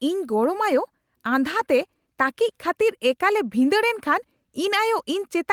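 Speech, with one short fault. Between 1.59 and 1.61 s there is a lost packet rebuilt from error correction. The stretch lasts 20 ms, which fits a single lost Opus packet. There is no gap or dropout. The next packet carried a low-bitrate spare copy of the missing audio, and the decoder played that instead. That copy holds less detail, so these 20 ms sound rougher and noisier than the speech around them.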